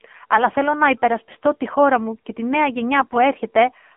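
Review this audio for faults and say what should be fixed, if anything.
The whole clip has passed through the AMR narrowband mobile codec. The speech sounds buzzy and synthetic, with a clearly audible coding texture, and a bright, hollow telephone colour. On a spectrogram, energy stops sharply near 3.5 kHz and thins below about 250 Hz, with a smeared, blocky look in the harmonics. That degree of damage fits a low AMR-NB mode around 7.4 kbps. To prevent it, capture or route the audio over a wideband path, or at least a higher AMR mode.

AMR bit errors hit twice: at 0.32–0.42 s, just before "θέλω να υπερασπιστώ τη", and at 3.00–3.19 s, just after "μου και τη νέα". In both spots the voice keeps roughly its pitch and loudness but turns hoarse and gargly. Corrupted pulse positions and fine gain and spectral values make the decoder rebuild the wrong excitation. The first burst sounds harsher, consistent with an error rate of a few percent across a couple of frames. 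The second is milder and longer, spanning roughly six frames. On a spectrogram the harmonic striations break into noisy, scattered energy while the overall envelope in the waveform stays level. Stronger channel protection or a better radio link would prevent these errors.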